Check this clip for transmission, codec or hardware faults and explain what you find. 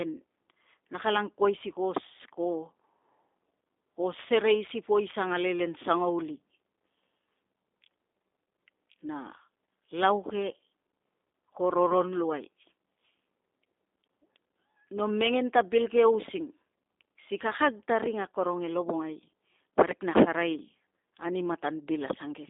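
The speech is rough and faintly synthetic from start to finish, with a hollow, narrow telephone tone: no low body below about 250 Hz and nothing above 3.7 kHz. That is G.729 codec damage, and it is plainly audible. The codec models each 10 ms frame with a vocal tract filter, a pitch predictor and a few pulses, then rebuilds the speech from those. The sound points to a coarse 8 kbit/s rate, and the band-limited line shapes the tone.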